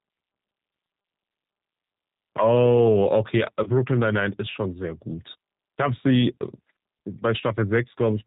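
From start to finish the speech carries the sound of the G.729 codec. Nothing reaches above 4 kHz, and the slightly rough, synthetic texture fits an 8 kbit/s coder that rebuilds each 10 ms frame from a vocal tract filter, a pitch predictor and a few pulses. Plain band-limiting to telephone bandwidth would sound dull but smooth. Here the grain is built into the voice itself, which marks it as model-based coding rather than filtering.

At 3.63 s, running to 3.70 s, the speech turns briefly into a stretched buzzy tone or coloured noise that sags in level. This is VoIP packet loss concealed by the speech codec, and the gap fits a single lost 30 ms packet. The decoder keeps repeating its last pitch and filter while lowering the gain, and because each frame builds on the one before, the voice stays weak for a moment after real data resumes. A simple dropout would go silent or click instead of filling the gap like this.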